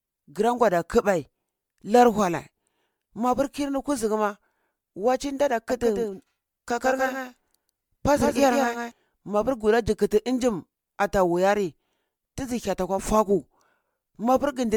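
Throughout the speech there is a swirly, hollow smearing, with consonant onsets blurred more than a single pass at this quality would explain. This is generation loss, likely from the audio being decoded and re-encoded several times, roughly seven, with an MP3 codec at around 128 kbit/s. Each pass requantises on a shifted frame grid, so the noise and spectral gaps pile up instead of staying fixed.

From 5.70 s, just after "kuzugu ma waci ndada", until 8.92 s, a doubled audio track appears. A second full-band copy of the speech trails the original by about 150 ms at roughly 5 dB lower level. It carries no reverberant decay or room colouring, which points to a second, slower capture path or an edit holding two offset copies. The copy switches in and out abruptly at both ends.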